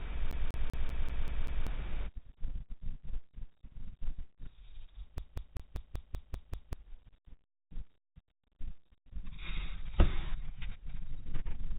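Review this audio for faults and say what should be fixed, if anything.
A fast, even stutter repeats the same 0.19 s of speech from 0.31 to 1.67 s and again from 5.18 to 6.73 s. It is a CD stuck on one turn, where the laser jumps back a track every revolution. Re-rip from a clean disc with error-correcting extraction to prevent it.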